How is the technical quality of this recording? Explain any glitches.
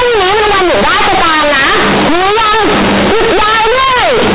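The recording is heavily distorted from start to finish. The speech is very loud and harshly buzzy, and strong noise fills every pause. This is companded audio read as linear: mu-law telephone bytes are played as plain 8-bit samples without expansion, so quiet passages swing almost as wide as loud ones and the waveform is bent out of shape.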